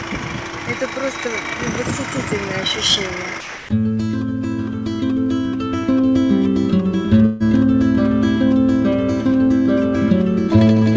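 From 3.41 to 3.69 s the sound gives way to steady low noise for about 280 ms, likely sound dropped by the voice detector, with comfort noise filling the gap. At 7.26 to 7.43 s a burst of packet loss leaves about 150 ms missing; the last sound is stretched and faded, then resumes later. Throughout, nothing is heard above 8 kHz, consistent with a wideband call codec.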